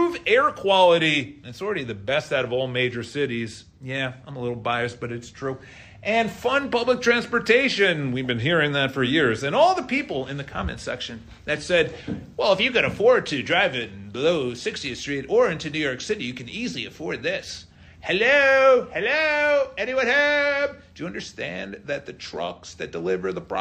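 No technical faults can be heard anywhere in this recording.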